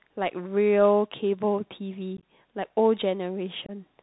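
Throughout the clip, the speech sounds muffled and boxed-in, with nothing above 4 kHz, scratchy s sounds and a granular hiss underneath. This is the Bluetooth CVSD headset codec, which fits a 64 kbit/s link. It encodes one up-or-down bit per sample, and its adaptive step cannot keep pace with loud high sounds.

From 2.17 to 2.23 s, the speech breaks into a rough, chopped crackle. About 37.5 ms is missing, scattered across 60 ms, with the longest gap 15 ms. From 3.66 to 3.71 s, a shorter loss of about 22.5 ms cuts in abruptly, and the speech briefly returns quieter. Both are unconcealed Bluetooth headset packet loss. A handful of voice packets, then a few more, never arrived, and silence or an idle pattern replaced them with no attempt at concealment.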